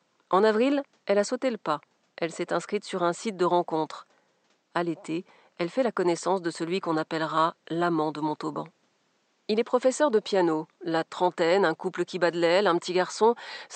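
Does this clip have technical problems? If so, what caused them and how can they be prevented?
No, there's nothing technically wrong in this speech recording, and the faint room noise sitting about 45 dB below the speech is simply part of the space it was recorded in.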